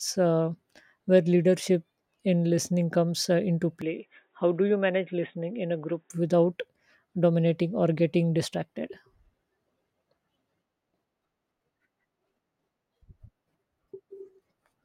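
Input switched to a poorer device, 3.82 to 6.10 s: speech abruptly loses everything above 3.8 kHz and turns boxy, likely a narrower-band microphone, then clears without a gap.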